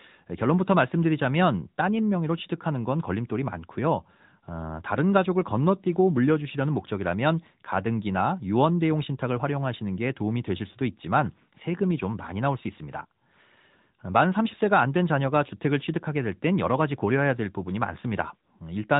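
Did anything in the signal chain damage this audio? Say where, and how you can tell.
Yes, at the codec stage: the AMR narrowband mobile codec has processed the speech for the whole clip. Nothing above about 3.8 kHz survives, and the voice has a plainly audible buzzy, synthetic edge, which fits a mid-rate AMR-NB mode near 10 kbps. A plain low-pass filter would only dull the top. Here the vocal-tract model and sparse pulse excitation, rebuilt every 20 ms frame, reshape the voice's texture as well.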